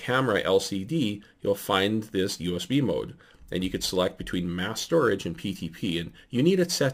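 No faults can be heard anywhere in the clip.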